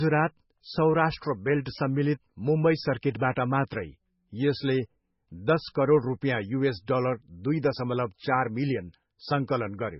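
The speech sounds dull and watery from start to finish, with a swirling, bubbly texture and metallic chirps on s sounds. Nothing comes through above about 5.6 kHz, so the top end is simply missing. The likely cause is heavy MP3 compression at a very low bitrate, around 16 kbps. Short of bits, the encoder cuts off the treble and lets weak frequency components flicker on and off between frames, producing that watery swirl.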